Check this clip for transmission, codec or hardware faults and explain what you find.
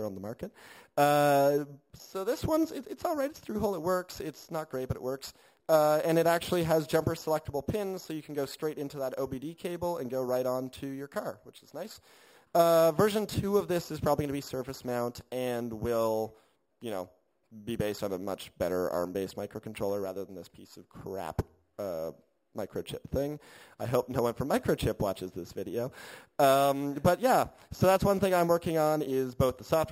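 One fault runs through the whole clip. Imaging from sample-and-hold upsampling: each sample appears repeated without smoothing, pointing to a 12 kHz rate raised to 48 kHz. Mirrored copies fill 6 kHz to 12 kHz at about 20 dB down, heard as a bright metallic fizz tracking the sound's level.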